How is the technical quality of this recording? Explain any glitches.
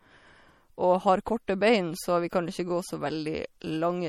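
The quality is compromised by plainly audible compression damage that runs through the whole clip. The likely cause is MP3 compression at a starved bitrate, which fits roughly 48 kbps. Short of bits, the encoder drops weak frequency lines that flicker between frames and removes everything above 18.9 kHz, leaving the speech watery and swirling, with metallic chirps on s sounds and smeared attacks.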